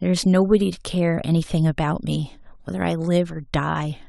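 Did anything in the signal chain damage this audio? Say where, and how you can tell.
No, no damage is audible.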